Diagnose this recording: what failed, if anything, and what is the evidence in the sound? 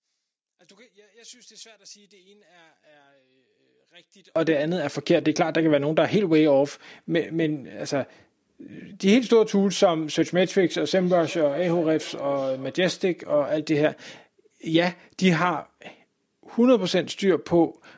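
From 0.00 to 4.36 s the speech drops by about 29 dB, which is likely one channel inverted in the wiring, so the shared sound cancels in the mono sum.

Between 10.8 and 12.87 s there's a feedback echo between two devices: speech comes back roughly every 0.4 s, at most about 20 dB below the speech, because another device replays it into the mic.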